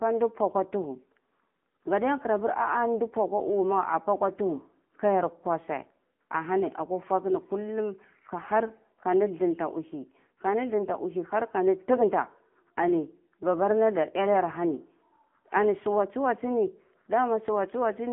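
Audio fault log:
throughout, AMR narrowband mobile codec: The speech sounds boxed-in and buzzy, with a clearly synthetic, metallic edge on every phrase. Nothing above about 3.7 kHz survives, and the low end thins out below roughly 200 Hz, giving the familiar phone-line band. This is narrowband mobile coding: the voice is rebuilt from a vocal-tract model fed by a handful of pulses per short subframe, and the obvious roughness fits a low mode of around 8 kbps.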